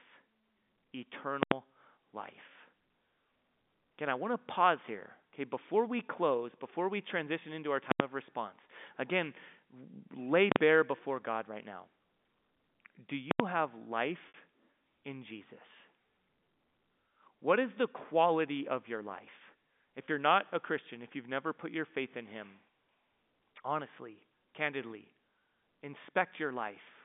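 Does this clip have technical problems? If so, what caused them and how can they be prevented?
Yes. Invalid numbers at full scale occur at 1.43 to 1.52 s, 7.92 to 8.00 s, 10.52 to 10.56 s and 13.31 to 13.40 s. In each one, a processing stage produced infinite or invalid values that were clamped to the maximum sample value. Each is heard as a loud pop at its edges with dead air between. Three blocks last about 85 ms and one about 43 ms, which points to 4096- and 2048-sample processing blocks. Prevent it by checking for non-finite values and resetting or muting the stage.

Packet loss with pitch repetition occurs at 14.28 to 14.34 s (60 ms) and at 20.06 s (20 ms), consistent with three packets and then one going missing. The receiver filled each gap by repeating the last pitch cycle, giving a brief held, buzzy sound, with the longer gap fading toward silence before normal audio resumes. The G.711 telephone band underneath is intact. 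Prevent it with a larger jitter buffer, forward error correction or a more reliable network path.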